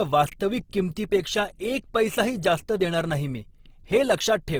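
Speech throughout, with a grainy, rough, plainly noisy texture rather than swirling holes, while the top end still reaches the full band. This is likely Opus compression in its CELT music mode, which fits a bitrate around 16 kbps.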